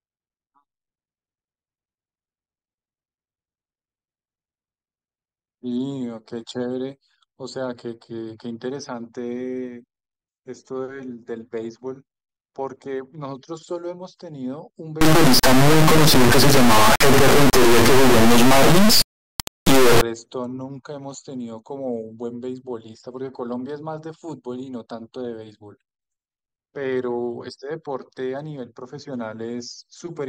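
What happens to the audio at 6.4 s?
Nothing goes wrong at 6.4 s; the speech carries on intact through that moment, with no dropout, click, distortion or other audible fault.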